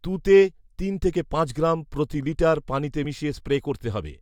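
Compressed frames skipped at 3.04 s, just after "গ্রাম প্রতি লিটার পানিতে": the speech jumps forward by roughly 20 ms, about a couple of whole compressed frames that never reached playback, either missing from the stream or rejected by the decoder as damaged. The speech resumes slightly further on than it should.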